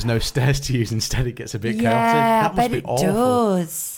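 At 1.92 to 1.94 s a single sharp loud pop stands a few decibels above the speech, which continues underneath; it is likely a voltage spike from a plug, switch or static discharge. At 2.73 s a tiny skip marks an overlap between stream segments: a few milliseconds vanished at the join of 2-second segments, so the waveform jumps.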